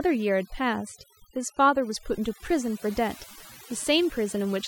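From start to finish the speech carries overdone noise removal. The noise reducer was pushed far too hard, so any frequency band sitting close to its idea of the noise floor gets pulled way down or switched off entirely. Softer parts of the voice fall into that range and vanish along with the noise. You hear it as dead-quiet gaps sprinkled with little twinkling specks.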